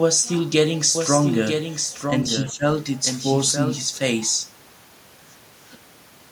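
Speech, with a second copy about 5 dB quieter trailing roughly a second behind from 0.95 to 3.79 s, flat and dry, switching in and out abruptly: a doubled audio track, likely from a second, slower capture path. From 2.44 to 2.63 s the voice dips by about 15 dB, speech suppressed in double talk, likely as the echo canceller turns everything down while both sides talk.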